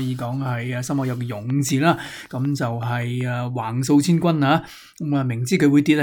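From 1.32 s to 3.22 s a train of clicks runs over the sound: roughly ten sharp, near-identical pulses at a steady 5.3 per second, each reaching about the level of the programme itself. The regular spacing and uniform shape point to an external, repeating source injecting impulses into the signal path, likely electrical interference from nearby equipment or a faulty connection or power supply. The result is a distinct, even ticking that sits on top of the material.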